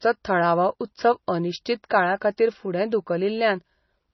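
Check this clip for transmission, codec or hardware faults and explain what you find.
The speech shows MP3 compression damage throughout, likely from MP3 encoding. Nothing survives above 5.9 kHz, and the heavy artefacts fit a starved bitrate near 24 kbps, where the encoder drops treble and flickers weak spectral lines between frames, giving a watery, swirling texture.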